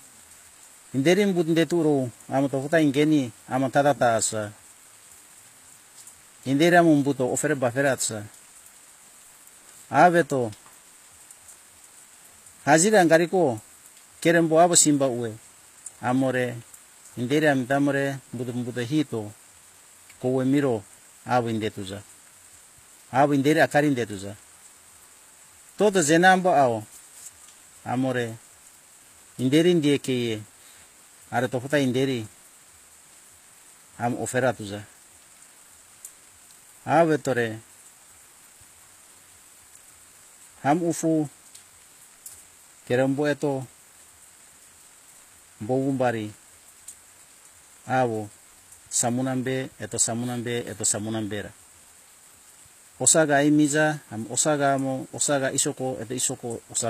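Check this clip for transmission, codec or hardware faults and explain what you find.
One fault runs through the whole speech clip: the treble is likely HE-AAC compression at a low bitrate, something like 24 kbps. The lower band is coded directly, while the upper band is rebuilt by copying lower bands upward under a coarse envelope, so s sounds turn gritty and lispy. On a spectrogram, the top shows repeated, smeared blocks above a crossover, with harmonics that fail to line up.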